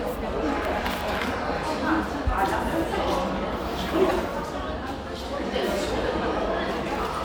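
A corrupt frame decoded at 4.09 to 4.11 s: bits inside one compressed frame of these sounds were flipped, and the decoder played it instead of discarding it. Misread codes and wrong gain values push energy into frequencies that don't belong there for the length of that single damaged frame. The result is a short, sharp blip or chirp, peaking at roughly -10 dBFS.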